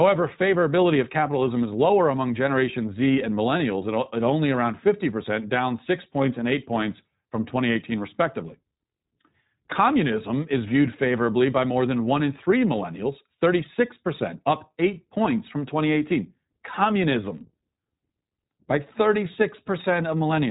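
Throughout, the speech carries iLBC codec damage. Nothing passes above 3.8 kHz. Each short frame is coded independently, leaving a plainly rough, synthetic edge, consistent with 20 ms frames.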